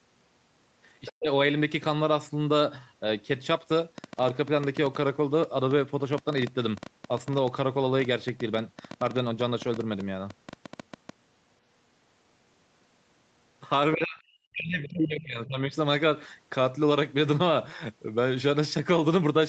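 Right at 1.05 to 1.13 s there's a brief scrap of the other side's voice leaking through, sitting about 20 dB under the speech. The echo canceller likely let some of the far-end loudspeaker sound back into the mic.

Overlapping that, from 1.11 to 1.28 s, the speech gets suppressed in double talk. The talker's voice drops hard, roughly 40 dB at its deepest, for something like 150 ms, likely while both sides are talking.

From 3.98 to 11.10 s there's a train of clicks: around fifty ticks at about 8 per second, unevenly spaced, peaking around 5 dB above the sound and audible in the pauses too. That's likely interference or a faulty connection.

Then 13.94 to 15.73 s brings speech suppressed in double talk again, this time longer. About 1.5 s of the voice is pushed down, dipping roughly 40 dB at worst, as the canceller likely mistakes overlapping talk for echo.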